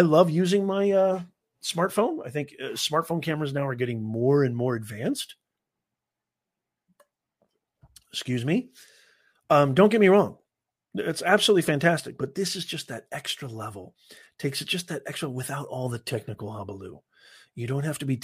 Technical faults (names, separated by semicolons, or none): none